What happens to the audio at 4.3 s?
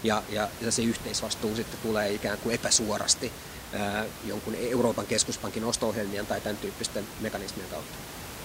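Nothing goes wrong at 4.3 s: the speech continues intact there, with only the room noise sitting about 12 dB beneath it.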